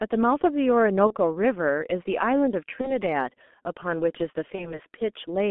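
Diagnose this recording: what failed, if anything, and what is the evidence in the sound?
Codec stage: the G.723.1 codec runs through the whole speech recording. The sound is muffled and hoarse, with blurred consonants, and confined to about 200 Hz–3.5 kHz. That heavy damage fits its 6.3 kbit/s mode, beyond simple band-limiting.

Network stage: VoIP packet loss concealed by the speech codec occurs at 1.07–1.15, 2.81–2.97 and 4.55–4.80 s. Each event is a fading, stretched stretch of buzz or coloured noise that fits one lost 30 ms frame. It lingers past the gap rather than dropping to silence.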